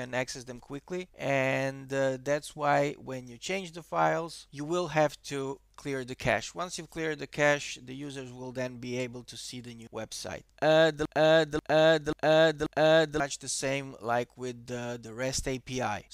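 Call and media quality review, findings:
Broken-record loop, 11.05 to 13.2 s: a 0.54 s fragment replays back to back four times, exact copies. Likely a stalled player or stream resending its last held buffer. The audio for that stretch never arrives and is gone.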